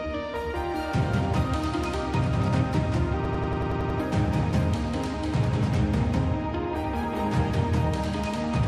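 From 3.25 s to 3.99 s, a hard machine-gun stutter: one 93 ms fragment repeats eight times at about 10.8 Hz. This is a system hang loop, where the host stalled while the hardware kept replaying a 4096-sample ring buffer, dropping around 0.7 s of audio.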